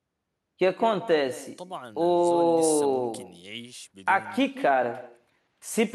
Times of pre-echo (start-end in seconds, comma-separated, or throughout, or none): none